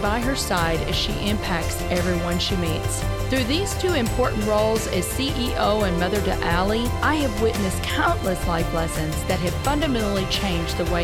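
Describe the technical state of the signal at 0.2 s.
At 0.2 s the signal is intact, with no audible fault at that point.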